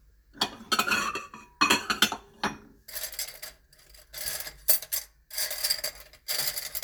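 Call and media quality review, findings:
Nothing stood out on listening to this recording of sounds.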